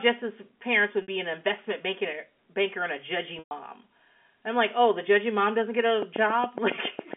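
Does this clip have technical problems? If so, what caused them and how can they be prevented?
Yes. Packet loss with pitch repetition occurs at 1.02 s for 60 ms, just before "be an investment banker", and at 3.39 s for 120 ms, just after "banker and a judgy". Rather than cutting to silence, the last pitch period repeats. The shorter gap is a brief buzzy hold, while the longer one fades out. A steadier network path with jitter buffering and forward error correction would prevent this.

A train of clicks runs from 6.02 to 7.14 s, after "judgy mom doesn't get". There are about ten near-identical ticks at a regular 7.2 per second, roughly 10 dB above the speech. Unlike random codec crackle, the clicks keep their even pace regardless of the audio. The likely cause is electrical interference or a faulty connection or power supply. Shielding cables, moving away from nearby equipment and checking connections and the power supply would prevent them.

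The G.711 telephone band, limited to about 3.4 kHz, is audible throughout.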